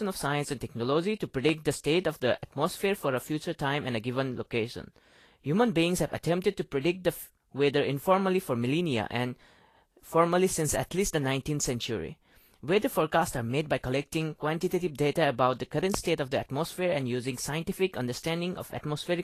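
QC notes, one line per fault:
throughout: low-bitrate audio saved at a high bitrate. Coding artefacts and nothing above 14.2 kHz, likely a roughly 36 kbit/s Vorbis source re-encoded as roughly 256 kbit/s MP3.
1.49–1.51 s and 15.94–15.96 s: loud pop. Single sharp pops peaking about 15 and 20 dB above the speech, which continues underneath; likely a voltage step from a plug, switch or static.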